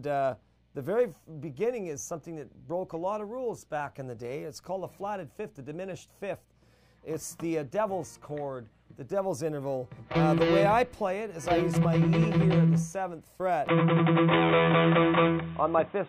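At 13.68 s the sound turns abruptly duller, with no gap: nothing above 3.8 kHz from there on, a level step of around 5 dB and a new noise floor roughly 35 dB down. The input likely switched to a poorer device. A spectrogram shows a flat ceiling appearing.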